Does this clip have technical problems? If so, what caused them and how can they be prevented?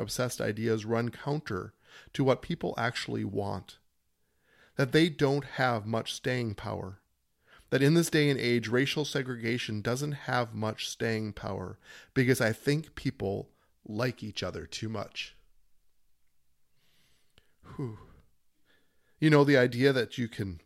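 No, there are no technical problems to hear in this speech clip. With nothing wrong, there is no cause to trace and nothing that needs preventing.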